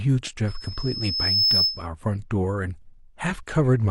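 At 0.47 s a loudspeaker feedback squeal begins. The microphone is picking up the speaker it drives, and at 5.2 kHz the loop gain goes above one. That tone feeds on itself. It swells over roughly a second into a thin, piercing whistle, ending up a little louder than the speech. It stops at 1.87 s.

Inside the squeal, from 1.09 to 1.13 s, a short stretch of damaged data in a compressed stream passes through. Those frames reach the decoder corrupted. It misreads them, loses its place, and hunts for the next good frame header. The result is a brief glitch.

The same fault returns from 3.26 to 3.32 s. Again the corrupted frames throw the decoder off sync. It gives another short glitch.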